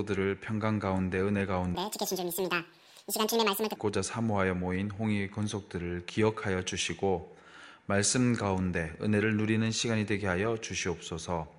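From 1.75 to 3.76 s, the sound jumps an octave and races at double speed: a wrong sample rate, fitting 22 kHz audio played at 44.1 kHz.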